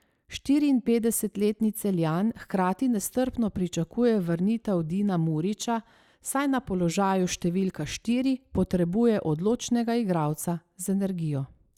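Nothing in this speech recording stands out as a technical fault. There are no events to place on the timeline.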